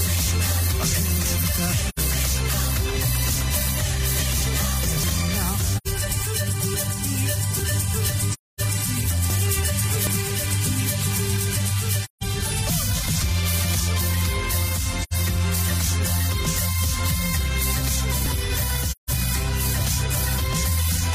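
AAC frame loss with muting: lost frames were decoded as silence, so the sound fades out and back in, leaving soft-edged holes at 1.88–1.99, 5.77–5.88, 8.31–8.61 (longest), 12.04–12.23, 15.02–15.14 and 18.91–19.10 s, consistent with runs of roughly 43 ms frames.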